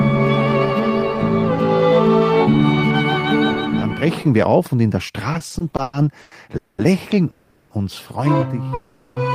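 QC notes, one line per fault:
5.33–6.33 s, repeated stalls (stutter): the sound keeps catching and dragging here. There are nine short hold-ups, the longest about 110 ms, adding up to 340 ms, so roughly a third of that second is stretched-out filler. Packets were arriving late or slower than playback, so the jitter buffer kept running dry, and each time the receiver extended the last bit of sound until it could carry on. Nothing is actually lost, which is why it drags rather than skips.
6.57–6.80 s, 7.30–7.72 s and 8.74–9.18 s, call audio freeze: three hangs where the last sound is stretched into a fading buzz or hiss instead of moving forward. They last 210 ms, 400 ms and 420 ms, and none drops to silence. The likely cause is packets held up in transit emptying the jitter buffer. Playback then resumes from where it stopped, so each freeze inserts a gap and pushes everything after it later, with nothing missing.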